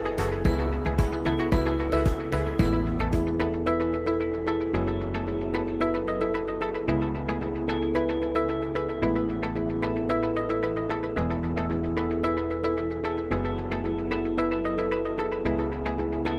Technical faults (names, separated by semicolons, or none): none